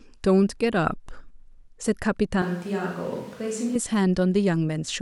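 At 2.42 s the speech abruptly turns roomy and hollow, with thinner low end, and stays that way until 3.75 s, when the close sound snaps back. This points to a switch to a distant microphone, likely because the close microphone's signal dropped out. The level falls by about 5 dB, and room noise sits roughly 25 dB below the speech. The waveform shows a sudden step down in amplitude, and the spectrogram shows weaker low frequencies, smeared reverberant tails, and a raised noise floor between the gaps.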